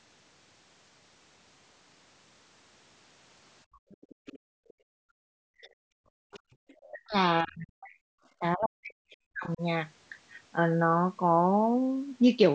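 Speech from a call, with content topping out at 8 kHz, and with echo-canceller faults between 3.64 and 9.61 s. Background gated by the echo canceller appears from 3.64 to 5.25 s and again at 6.54 to 6.63 s. The room tone is pulled down by about 37 dB while the far end plays through the loudspeaker, in dips totalling around a second, then returns as the canceller releases. The other side's voice leaking through is heard from 3.91 to 4.73 s and 6.32 to 6.9 s, sitting roughly 25 dB below the talker. This is likely loudspeaker playback the canceller failed to fully subtract from the microphone, so it comes through as a faint second voice. Speech suppressed in double talk hits from 5.53 to 6.26 s and from 6.91 to 9.61 s. The talker's level drops by up to roughly 40 dB in pieces, about half a second in the first stretch and around two seconds in the second. The likely cause is both sides speaking at once, with the canceller unable to separate near speech from echo and attenuating both.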